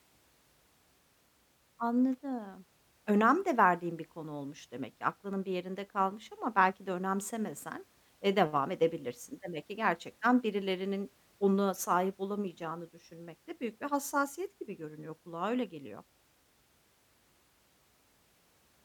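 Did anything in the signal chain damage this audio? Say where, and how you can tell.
No, nothing in this recording points to signal-chain damage.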